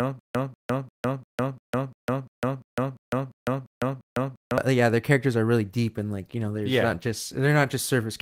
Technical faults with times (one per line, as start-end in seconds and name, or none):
0.00-4.58 stutter with silent gaps
5.64-7.75 call bitrate drop